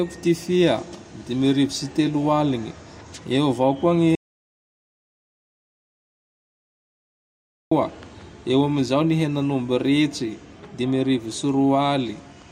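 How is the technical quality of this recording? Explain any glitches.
The recording has one clear glitch, an audio dropout to silence. It runs from 4.15 s to 7.71 s, so about 3.6 s of speech is missing. The sound cuts off mid-flow and then resumes abruptly. The gap is dead silence. No room tone or background hiss remains. The input signal was likely lost, through a disconnected device, a failed link or a mute, while the recorder kept writing silence. Whatever was said in that stretch is gone.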